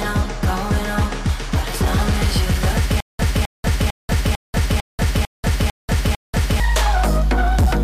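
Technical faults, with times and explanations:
Throughout: hard clipping. The level runs about 5 dB past what one stage could pass, so roughly one sample in twenty has its peak sliced flat. Those flat tops add high harmonics, giving a gritty crackle on loud moments, harsher and more abrupt than the gentle rounding of soft saturation.
3.00 to 6.60 s: stutter with silent gaps. A 0.26 s fragment plays eight times, each followed by about 0.19 s of dead digital silence, repeating every 0.45 s. The likely cause is a stalled stream replaying its last buffer on each retry. Unlike a plain dropout, the same piece returns, and the audio meant for that span is lost.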